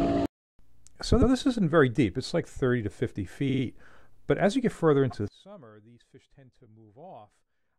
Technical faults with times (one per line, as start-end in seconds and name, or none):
1.21-1.30 repeated frames
3.48-3.62 repeated frames
5.28-7.78 one channel inverted